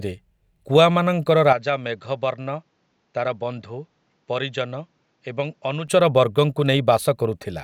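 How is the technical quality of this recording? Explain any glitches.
The recording has one clear fault. From 1.53 to 5.88 s the speech turns duller and roughly 10 dB quieter, with nothing above 7.6 kHz and a faint new noise floor, then clears again. The likely cause is the input switched to a poorer device, whose narrower band and own tone replace the original microphone, with no gap at either switch.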